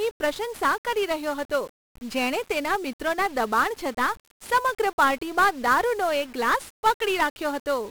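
The speech in this clip has passed through 1-bit DFPWM compression from start to finish, a codec that keeps only a single bit per sample to push an adaptive level up or down rather than storing the waveform itself. The damage is heavy: coarse broadband quantisation noise rides under every syllable, giving a fuzzy, crackling texture, and the upper frequencies disappear into hiss, which fits a one-bit stream running at around 48 kbps.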